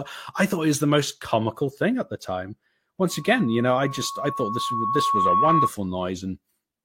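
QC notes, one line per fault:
3.09–5.71 s, loudspeaker feedback squeal: right after "thing at the time" a single 1.1 kHz tone swells over about two seconds to a few dB above the speech, as the mic-to-speaker loop exceeds unity gain there. Unlike a steady interfering tone, it grows by itself.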